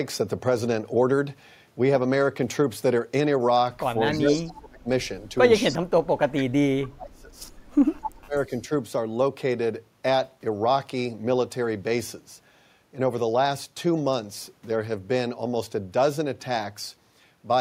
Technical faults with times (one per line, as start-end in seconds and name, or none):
4.11-4.45 echo leak
4.11-4.88 speech suppressed in double talk
5.66-7.41 speech suppressed in double talk
5.68-5.78 echo leak
8.00-8.51 speech suppressed in double talk
8.36-8.60 echo leak